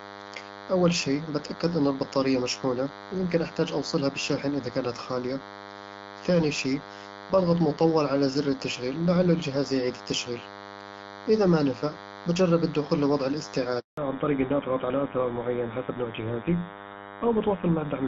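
Throughout the recording, a nearby DECT cordless phone or base station is firing its short radio bursts every 10 ms, and the audio circuitry is rectifying them into the signal. The result is DECT cordless phone buzz: a thin, steady 100 Hz drone rich in harmonics, sitting some 15 dB below the speech. Because it is not tied to the talker, it persists through pauses and never changes character.

At 13.79 s the call is passed from one network to another. During that handover gap no speech frames reach the receiver, so the voice decays within a few tens of milliseconds and then drops out completely until 13.97 s. The silence lasts 180 ms, and whatever was said in that window is simply missing rather than smeared or repeated.

When the new link comes up at 13.97 s, the call has lost HD Voice, and what follows is a fallback to narrowband that runs to the end of the clip. Before the switch, the wideband AMR-WB path carries the speech with only light coding roughness, in a way that fits a rate around 12.65 kbit/s. 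After it, the sound points to the older GSM full-rate codec, and nothing above 4 kHz survives. Sibilants and consonant detail lose their crispness, and the voice turns noticeably duller and rougher.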